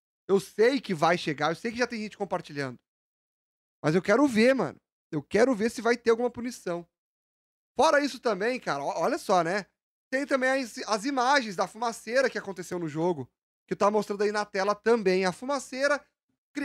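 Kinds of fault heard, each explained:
Corrupt frame decoded: one damaged compressed frame played anyway, a brief chirp, squeak, blip or burst of noise near 12.21 s peaking around -25 dBFS, showing as a short patch of energy at the wrong frequencies on the spectrogram.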